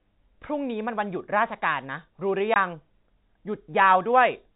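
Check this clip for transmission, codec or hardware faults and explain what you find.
One transmission fault, over a narrowband telephone path with no audible content above 4 kHz. Packet loss filled with silence at 2.54 s: one 20 ms packet went missing and was replaced by digital silence, leaving a hole shown as a flat waveform gap and a blank spectrogram column.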